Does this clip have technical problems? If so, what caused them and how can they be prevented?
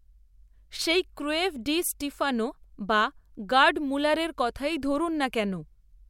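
No, nothing in this speech recording points to a technical fault, so there is no cause to trace and nothing to prevent.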